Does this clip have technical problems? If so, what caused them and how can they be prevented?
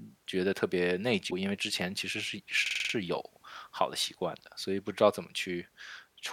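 Yes, there are two distinct faults.

The first is damaged data in a compressed stream, from 1.27 to 1.33 s. A short blip cuts through the speech there. Some of the compressed bytes in that region were corrupted or lost. The decoder could not read those frames properly. It lost sync and had to hunt for the next valid frame header, and the garbled output in between is the blip. Transferring and storing files with checksums or error-checked protocols prevents this.

The second is a system hang loop, from 2.66 to 2.94 s. One slice of about 46 ms repeats exactly six times. That produces a rapid mechanical stutter at about 21.5 Hz. The loop length fits a 2048-sample buffer. The computer or audio driver briefly froze while the sound hardware kept replaying the same ring buffer. When playback resumed, little or no audio was skipped. Stable drivers, less system load during recording, and a watchdog that silences a stalled buffer prevent this.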